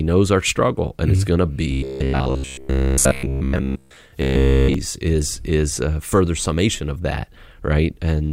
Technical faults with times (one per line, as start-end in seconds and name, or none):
1.72-3.97 robotic sound from repeated short buffers
4.22-4.74 robotic sound from repeated short buffers